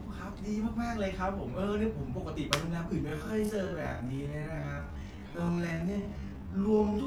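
At 3.03 s the speech suddenly drops to about half speed, 0.51 times the original pace, and stays that way to the end while the pitch holds steady. It drags, likely a time-stretched section padded out by repeating short slices.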